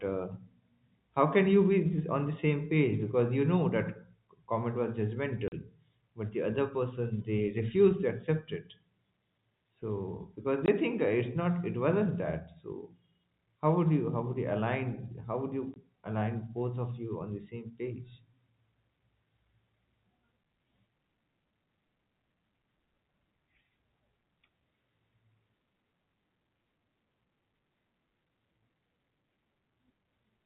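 Packet loss filled with silence at 5.48–5.52 s, 10.66–10.68 s and 15.74–15.76 s: lost stretches were replaced by dead silence, leaving hard-edged holes of 40 ms, then 20 ms twice, which points to 20 ms packets dropping.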